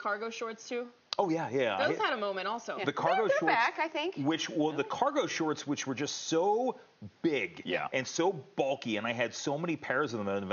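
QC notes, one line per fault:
No technical faults are audible at any point in the signal.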